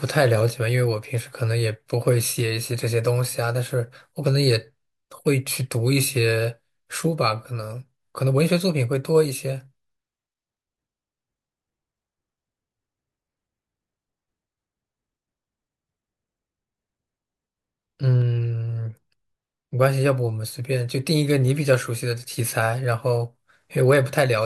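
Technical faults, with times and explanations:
No technical faults are audible in this speech recording.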